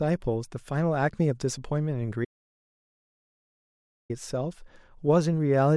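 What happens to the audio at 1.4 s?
Nothing goes wrong at 1.4 s; the speech continues intact through that moment, with no dropout, click or distortion to be heard.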